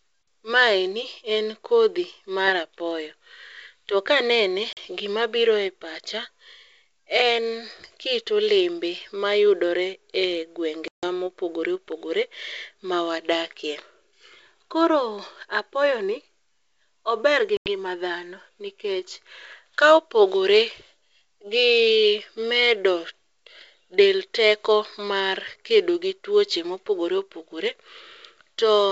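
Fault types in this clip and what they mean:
Packet loss on an ADPCM call: Stretches of the wideband G.722 stream drop out and are filled with silence, leaving hard-edged holes of 40 ms at 4.73 s, 150 ms at 10.88 s and 90 ms at 17.57 s. The decoder's adaptive predictor and step size lose track of the sender's. So the sound comes back from each gap with brief, slight distortion. It settles within tens of milliseconds.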